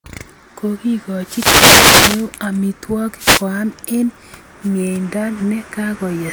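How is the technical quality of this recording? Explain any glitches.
The recording is marred by two wireless microphone noise hits. The first runs from 1.20 to 2.31 s. The second, shorter one runs from 3.16 to 3.47 s. An analogue FM radio link fades when reflected signals cancel the direct one. As the signal weakens, receiver noise rises. In a deep fade it breaks into clicks. Each hit sounds like a swish of static sweeping over the speech.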